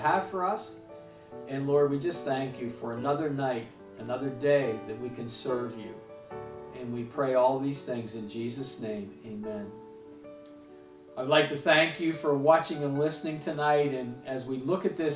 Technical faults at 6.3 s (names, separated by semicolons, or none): none